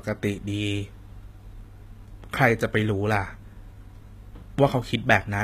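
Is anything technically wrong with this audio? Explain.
Yes. Throughout the speech, sibilants sound gritty and lispy, and the treble has a bright but synthetic, metallic quality with nothing above 14.9 kHz. The likely cause is HE-AAC compression, where upper bands are rebuilt by copying lower ones, consistent with a bitrate near 20 kbps.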